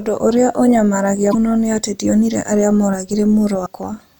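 At 1.29 to 1.35 s, the speech breaks into a short glitch. It comes back at 3.62 to 3.67 s. Both are damaged data in a compressed stream. Part of the encoded bytes there is corrupt. The decoder cannot read those frames properly. It loses its place and hunts for the next valid frame header. Each burst lasts about 50 ms and sounds like a brief chirp, squawk, click or short hole.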